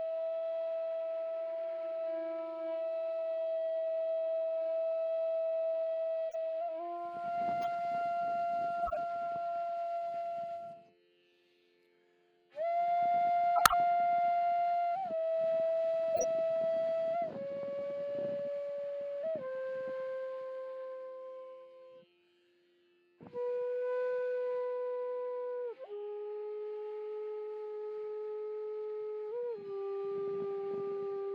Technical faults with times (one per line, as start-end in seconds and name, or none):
6.29-6.36 corrupt frame decoded
7.62-7.67 corrupt frame decoded
8.82-8.97 corrupt frame decoded
13.55-13.74 corrupt frame decoded
16.14-16.24 corrupt frame decoded